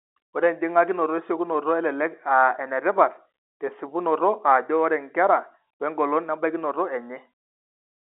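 The speech carries no technical faults, and what can be heard is an ordinary G.711 mu-law telephone channel at 64 kbps, with the line band running from 300 Hz to 3.6 kHz, nothing above 3.8 kHz, and at most a faint trace of the coding's level-following noise beneath it.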